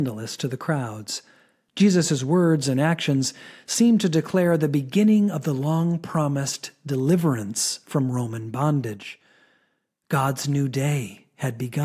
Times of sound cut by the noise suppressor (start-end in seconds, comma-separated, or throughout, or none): none